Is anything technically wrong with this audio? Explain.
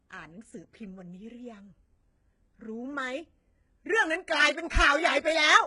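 Yes, there are two problems.

Throughout the clip, the speech has heavy codec damage. The upper range sounds synthetic rather than natural, with s sounds coming across gritty, metallic or lispy, and nothing at all above 11 kHz. This is likely HE-AAC compression at a very low bitrate, consistent with roughly 12 kbps. That codec keeps only the lower spectrum and rebuilds the treble by copying lower bands upward and shaping them with a coarse envelope, so harmonics fail to line up across the crossover.

From 4.41 to 4.43 s there is a brief garbled, jumbled moment. These are chunks out of order: one chunk of about 10.7 ms arrived or was written one chunk late and plays after the chunk that should have followed it. Nothing is missing, but the wrong sequence leaves three hard joins packed into that short span, which is what makes the sound jumble.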